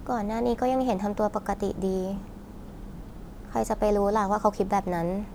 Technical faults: none

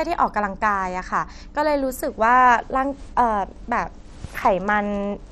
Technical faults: MP2 compression

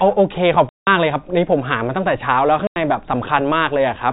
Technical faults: packet loss filled with silence

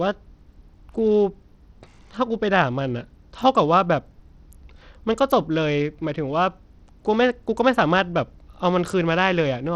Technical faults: Bluetooth SBC compression

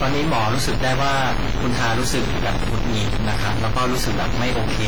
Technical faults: stuck bit; WMA compression

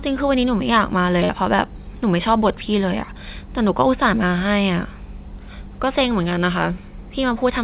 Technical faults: short concealed packet loss

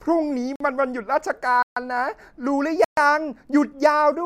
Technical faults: block of digital silence

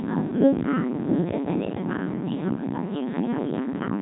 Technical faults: Codec 2 vocoder

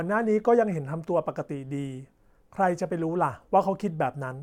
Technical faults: none

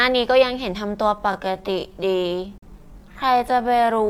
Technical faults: time-stretched section; digital broadcast dropout

